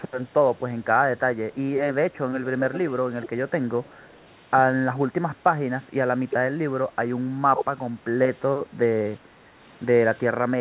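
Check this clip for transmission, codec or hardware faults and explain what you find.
Two kinds of fault turn up in this speech clip: some echo leak in the first half and a short double-talk suppression later on.

Echo leak shows up at 2.58–2.91 s, 3.22–3.30 s and 3.84–4.20 s. You hear a faint delayed copy of the voice trailing about 387 ms behind. It's likely a loudspeaker-side echo canceller letting residue through. The first two scraps sit well below the voice, and the third is much fainter.

Speech suppressed in double talk hits at 7.55 s. The voice dips by about 10 dB for only about 50 ms. It's likely the echo canceller mistook overlapping talk for echo and briefly ducked the talker along with it.

For context, everything stops at 4 kHz, which fits a narrowband G.711-style call path.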